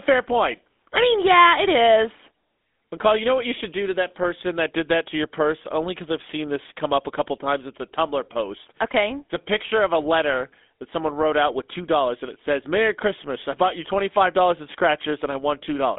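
Throughout the speech, the GSM full-rate codec leaves its mark. It rebuilds the voice from a vocal-tract model driven by coarse, regularly spaced pulses, which fits a 13 kbps full-rate stream. That excitation gives the plainly audible buzzy, gravelly grain. A simply band-limited telephone line would sound thin but clean. The passband sits between 250 Hz and 3.6 kHz, with nothing above 3.8 kHz, yet the roughness, not the narrowness, is the giveaway.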